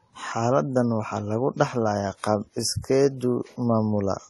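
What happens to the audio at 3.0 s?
At 3.0 s the speech carries the same layered coding damage heard throughout the clip, with nothing above 14 kHz. This is likely transcoding between lossy codecs, a low-rate WMA-style encode re-encoded as AAC-LC around 32 kbit/s, so the second codec spends bits on the first codec's artefacts and adds its own.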